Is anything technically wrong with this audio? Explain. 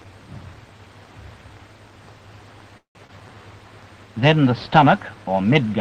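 Yes. Three faults cluster between 2.77 and 3.43 s.

Call audio freeze, 2.77 to 2.98 s. The sound stops advancing and the last moment is stretched into a fading tail that drops to silence for about 120 ms. About 176 ms of filler is inserted, and nothing is lost: when the audio resumes it continues exactly where it left off. The likely cause is packets held up in transit, so the jitter buffer ran dry and the receiver had to improvise until data arrived.

Short concealed packet loss, 3.07 to 3.12 s. About 60 ms of audio never reached the decoder in time. Only about 18 ms is synthesised to cover it, so the rest is simply skipped and the receiver lands roughly 40 ms further along. The patch extends the preceding sound and cross-fades back into real audio, which is heard as a brief smear with a small jump in continuity.

Jitter buffer slow-down, 3.13 to 3.43 s. Right after the loss the buffer is short of reserve. 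The receiver rebuilds it by repeating single pitch periods and fragments of pauses several times in a row, adding about 54 ms. Playback runs at about 84% speed while pitch stays unchanged, so sounds in this stretch are audibly drawn out.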